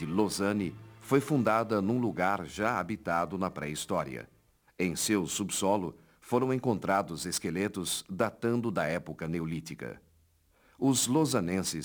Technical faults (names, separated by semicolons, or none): crude rate conversion